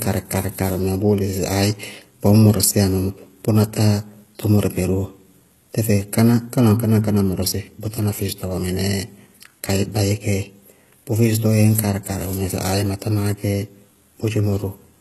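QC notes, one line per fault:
Throughout, HE-AAC compression: the treble is bright but synthetic, with gritty, lispy s sounds and nothing above 12.3 kHz. This is likely spectral band replication rebuilding the top band from copied lower bands, which fits a very low bitrate near 16 kbps.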